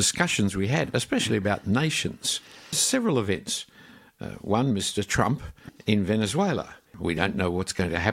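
No technical faults are audible.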